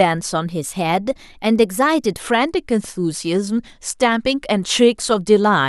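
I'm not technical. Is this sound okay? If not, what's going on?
No. From 0.48 to 2.19 s the speech runs about 6.4% fast and a semitone sharp, then snaps back: a drift correction step, likely from clock-matching software.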